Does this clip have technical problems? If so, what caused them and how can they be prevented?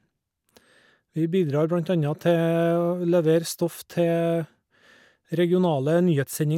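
No, nothing audible in this speech recording points to a technical fault, so there is nothing to trace or prevent.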